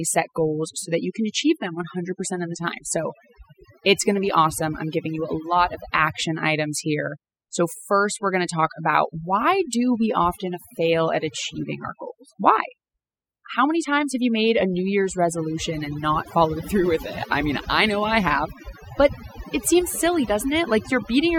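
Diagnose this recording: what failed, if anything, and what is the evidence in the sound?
Overdone noise removal in the processing stage, and it runs the whole clip. The gaps between phrases drop to near silence with twinkling specks, because bands near the noise estimate get pulled right down, taking the quiet parts of the voice with them.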